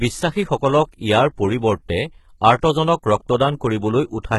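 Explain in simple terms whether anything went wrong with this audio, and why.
HE-AAC compression, likely, from start to finish: the top end is rebuilt from copied lower sound rather than kept, so the s sounds turn gritty and nothing remains above 11.8 kHz.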